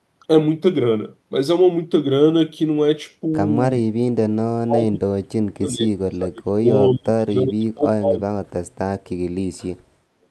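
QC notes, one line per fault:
4.64–6.69 s: speech suppressed in double talk. The speech level drops by up to about 40 dB, totalling around two seconds, likely echo-canceller suppression during overlapping talk.
6.93–8.36 s: speech suppressed in double talk. Same pattern, with dips reaching about 40 dB over roughly one second, as the canceller likely attenuates both near speech and echo together.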